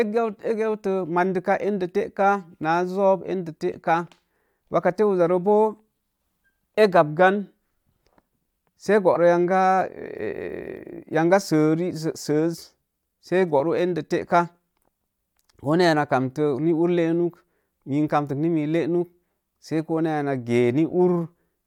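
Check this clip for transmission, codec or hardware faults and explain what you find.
One fault is present: compressed frames skipped, at 9.13 to 9.17 s. About 20 ms of the speech is missing, so the audio jumps forward by the length of the frames left out. The speech jumps ahead at the join.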